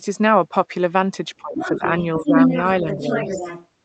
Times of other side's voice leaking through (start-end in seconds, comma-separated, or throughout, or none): 1.56-3.67